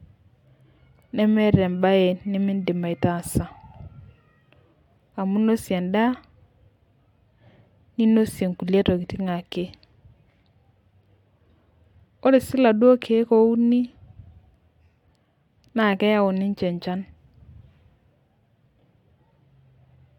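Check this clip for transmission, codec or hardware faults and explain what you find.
No faults can be heard anywhere in the recording.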